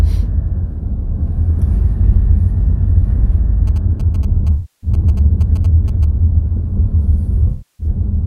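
A GSM phone close to the recording chain was signalling, and its radio bursts were rectified in the audio circuit. In this everyday-sound recording that shows up from 3.67 to 6.05 s as galloping ticks and short 217 Hz buzzes, sitting well below the main sound. AAC frame loss with concealment occurred twice, from 4.53 to 4.90 s and from 7.49 to 7.87 s. Each time the decoder rebuilt about 0.3 s from the last good spectrum, which fits a run of roughly 14 lost frames, leaving a smeared, noisy, phasey patch in place of the real sound.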